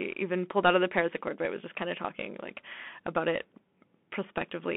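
From start to finish the speech sounds thin and boxed in, with nothing below about 200 Hz or above 3.5 kHz, scratchy s sounds and a grainy hiss underneath: Bluetooth CVSD headset codec, whose coarse one-bit up-or-down steps, fitting a 64 kbps link, cannot track sharp detail.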